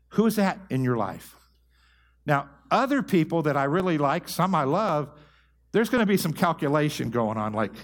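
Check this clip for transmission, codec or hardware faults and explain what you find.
One fault is present: clock drift buffer slips. From 0.54 s to 7.06 s, about seven clicks repeat every 1.08 s. The likely cause is two clocks disagreeing by roughly 700 ppm, so a buffer periodically drops or repeats a few dozen samples. On a spectrogram they appear as evenly spaced thin vertical broadband lines; the waveform shows small step discontinuities.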